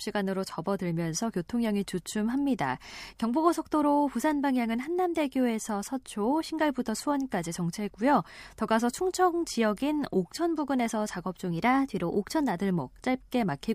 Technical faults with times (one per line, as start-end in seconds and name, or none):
11.52-12.57 drift correction step